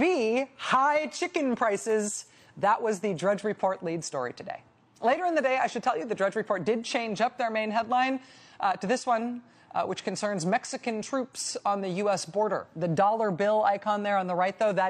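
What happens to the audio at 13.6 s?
Nothing goes wrong at 13.6 s: the audio runs on intact through that moment, with no dropout, click, distortion or other fault.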